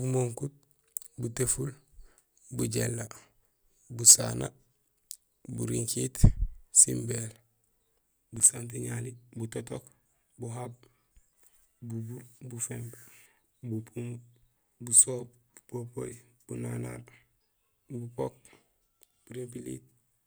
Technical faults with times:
8.36-8.49 processor overload crackle

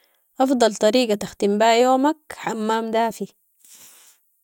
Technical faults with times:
none

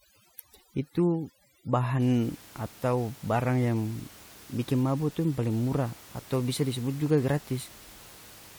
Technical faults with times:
0.00-2.00 overdone noise removal

